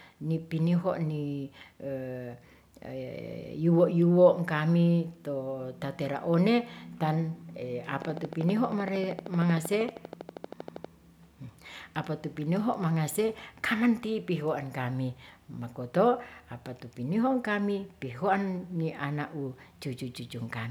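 A speech recording with a train of clicks from 8.02 to 10.86 s. Sharp, near-identical ticks arrive at a steady 12.7 per second, about forty in all. They stand roughly 10 dB above the sound and continue through pauses. Nearby electrical interference or a faulty connection or power supply is the likely cause.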